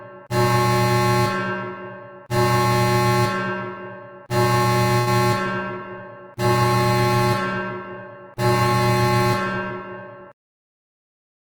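A recording of everyday sounds with three network-playback faults. From 4.99 to 5.10 s there is a short stall from a late packet. The jitter buffer ran dry, so the receiver stretched the last bit of sound for 75 ms until the packet arrived, then resumed from the same point with nothing lost. A listener hears a sound hang on a little too long. On a spectrogram the partials in that span run flat and unchanging, and in the waveform a short stretch repeats almost identically instead of evolving. From 5.48 to 11.03 s comes a call bitrate drop. The bandwidth estimate fell and the encoder went from 32 to 17 kbps, staying at the lowest rate for about 4.3 s. With roughly half the bits, fine detail is quantised coarsely, and the sound becomes rougher and watery. A spectrogram shows the upper region turning sparse and blotchy, with texture breaking into patches. Overlapping the end of that, from 10.15 to 11.45 s, a jitter buffer speed-up plays the audio at about 105% while keeping the pitch unchanged. 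The receiver trimmed about 70 ms in total, in many short pitch-period-sized cuts, to bring down excess buffered delay. The events sound slightly hurried. In the waveform they sit a little closer together, with small splice points, while spectrogram frequencies stay put.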